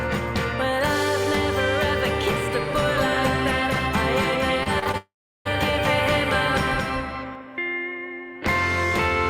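From 2.85 to 7.35 s you get a doubled audio track: a second full-band copy trails the first by roughly 200 ms, only around 5 dB down, with no room tail. It's likely a slower second capture path, and it cuts in and out abruptly.

Between 4.63 and 4.95 s there's repeated packet loss, and it sounds choppy. A handful of short holes, the longest about 26 ms, get patched by stretching the previous sound, so about a quarter of that stretch is filler.

Straight after, from 4.97 to 5.47 s, comes a long network dropout. The last sound smears on briefly as a fading buzz, then about 0.37 s of silence follows, likely because nothing arrived. The audio resumes with that half-second gone.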